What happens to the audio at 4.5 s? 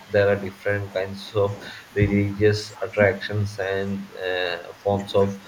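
At 4.5 s the speech dips by roughly 5 dB, with the level sagging on and off for about half a second between 3.99 and 4.86 s. This is likely speech suppressed in double talk: an echo canceller, unable to separate the talker from overlapping far-end sound, turned both down.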